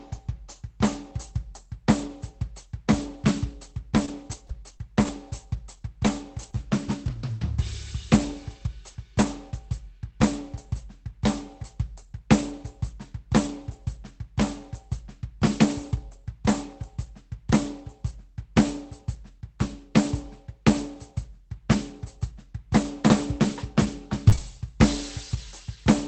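Between 4.05 and 5.09 s this music picks up brief ticks and small smears, about three of them with the longest around 20 ms. These are scattered short gaps: a few lost or late packets, each patched by carrying the preceding sound forward, filling roughly 5 percent of that stretch. Around 6.51 to 6.54 s, and again at 24.29 to 24.34 s and 24.36 to 24.39 s, there are quick wobbles where the sound briefly blurs. Each is a short concealed packet loss: about 20 ms never arrived in time, and the receiver extended the last audio before blending back into the real signal. Overlapping those spots, the sound turns rougher and noisier at 6.43 to 6.55 s, 6.52 to 6.54 s, 24.32 to 24.34 s and 24.37 to 24.39 s. These are lost packets rebuilt from error correction: the following Opus packet carried a low-bitrate backup copy, which the decoder played in place of the missing one, so no hole appears but detail suffers. 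The whole clip has a top end stopping at about 8 kHz, consistent with an Opus call stream near 20 kbps.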